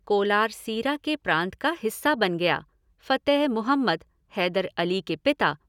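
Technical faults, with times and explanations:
No technical faults can be heard in this speech clip.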